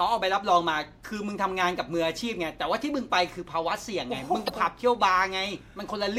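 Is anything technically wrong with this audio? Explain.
Yes, there is one short fault in this speech clip. From 4.46 to 4.50 s, about 44 ms, there is damaged data in the compressed stream. Some bytes in the encoded audio are corrupt, so the decoder misreads those frames, loses its place and hunts for the next valid frame header before normal decoding resumes. It comes out as a brief chirp, squawk, click or short hole. On a spectrogram it shows as a narrow vertical smear of broadband or garbled energy that breaks the harmonic pattern. On the waveform it shows as an irregular stretch with a discontinuity at each edge.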